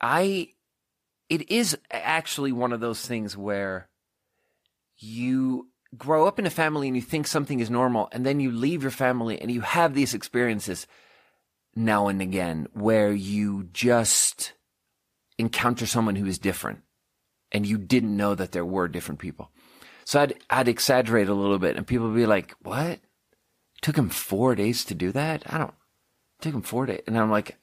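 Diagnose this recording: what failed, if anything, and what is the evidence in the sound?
A repeated frame at the codec or storage stage: just after "people would be like", 22.68 to 22.70 s, a 21.3 ms block plays twice, a length that fits one compressed frame. The duplicate adds a brief stutter and lengthens the speech, unlike a dropout, which removes audio.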